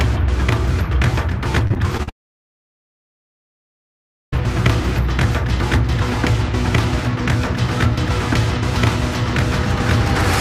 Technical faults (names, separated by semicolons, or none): repeated packet loss (robotic sound); long network dropout